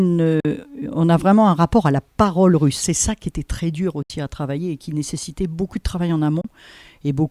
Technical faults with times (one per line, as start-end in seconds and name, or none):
0.40-0.45 Bluetooth dropout
4.02-4.10 Bluetooth dropout
6.41-6.45 Bluetooth dropout